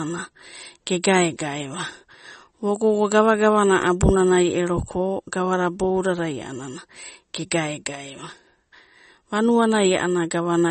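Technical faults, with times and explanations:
Throughout, MP3 compression: watery, swirly speech, with a flat spectrogram ceiling at 8.4 kHz and flickering gaps below it, likely from a low-bitrate encode near 32 kbps.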